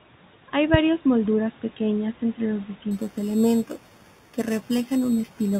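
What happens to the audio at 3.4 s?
Imaging from sample-and-hold upsampling runs from 2.91 s to the end: repeated 8 kHz samples mirror the speech into 4 to 8 kHz, heard as metallic fizz about 22 dB down.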